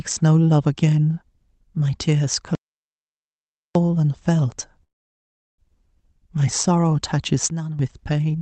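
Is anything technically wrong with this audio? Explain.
Yes, three faults are audible in this speech, heard through a call path whose Opus coding limits content to about 8 kHz.

From 2.55 to 3.75 s there is an audio dropout to silence. The input was likely lost, so about 1.2 s of speech is gone. The waveform shows a flat line and the spectrogram is blank, with no room tone.

From 4.83 to 5.60 s there is a call audio freeze. Packets were likely delayed, so the last sound briefly continues as a buzz before about 0.73 s of silence. Speech then resumes where it stopped, nothing missing but about 0.75 s later.

From 7.50 to 7.79 s a sudden gain jump drops speech and background together by about 11 dB, likely an unramped gain change. The waveform shows an abrupt step.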